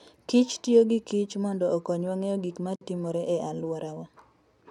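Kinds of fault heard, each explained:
Gap at a join of encoded pieces: a silence of about 53 ms breaks the speech at 2.76 s, where separately encoded pieces of roughly 4 s were butted together with their encoder delay and end padding kept; unlike a dropout, nothing is lost and the speech resumes exactly where it stopped.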